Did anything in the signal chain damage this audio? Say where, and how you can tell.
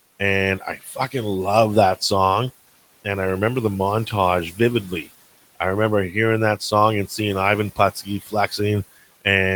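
Yes, speech was cut by the noise suppressor in call processing: speech at 0.78–1.14 s and 7.95–8.59 s is pulled down about 9 dB and 13 dB, misjudged as noise.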